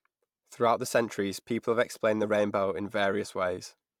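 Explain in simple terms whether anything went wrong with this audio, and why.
Nothing went wrong here: listening closely to the speech, there's no glitch, dropout or distortion anywhere in it.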